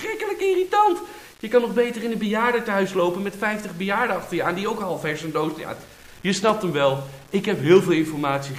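From start to finish the audio carries a grainy, gritty distortion that rises and falls with the sound itself, with quiet passages turning rough and the faintest moments sputtering or dropping to silence. The grit sits only around 30 dB below the signal. This points to low bit depth without dither, likely from rounding to something like 7 bits with no added noise, so the rounding error tracks the waveform instead of forming a steady hiss.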